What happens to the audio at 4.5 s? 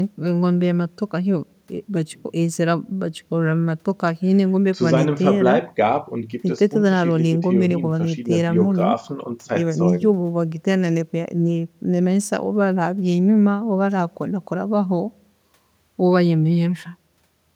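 Nothing goes wrong at 4.5 s; the speech carries on intact through that moment, with no dropout, click or other audible fault.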